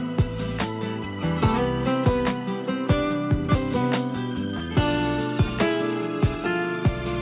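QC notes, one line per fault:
Nothing to flag here, just the narrowband sound of a telephone-style call path with nothing above 4 kHz, which fits a G.711 mu-law link.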